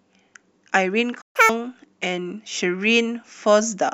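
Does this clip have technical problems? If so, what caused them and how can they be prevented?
Yes. At 1.21 s the speech stops dead and stays silent until 1.36 s, a gap of about 133 ms. This is a playback stall, and the likely cause is the player running out of buffered data or having its audio thread blocked. Unlike a packet-loss dropout, where a piece of the sound is skipped, the speech resumes exactly where it broke off, so nothing is missing, only delayed. Keeping a deeper playback buffer and running audio on a high-priority thread would prevent it.

From 1.36 to 1.49 s the speech then rushes ahead at double speed, with its pitch raised by around ten semitones, before returning to normal. This is catch-up at higher speed: the player resamples its backlog faster to win back the time lost in the stall. Unlike a steady pitch-shift or wrong-sample-rate fault, this lasts only a moment and comes straight after the silence, and tempo and pitch rise together. 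Catching up gradually, or with time-stretching that keeps the pitch, would avoid the chipmunk-like jump.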